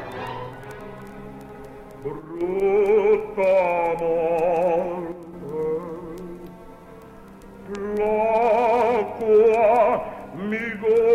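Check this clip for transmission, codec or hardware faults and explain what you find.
Two brief level drops stand out, and both point to one channel dropping out. From 2.19 to 2.41 s and again from 5.12 to 5.33 s, the sound falls abruptly by about 6 dB for roughly a fifth of a second, then snaps back. The likely cause is one stereo channel going missing before the mono sum, halving the shared content. Unlike a full dropout, the sound never goes silent, and unlike a gain ramp, the step is instant at both edges.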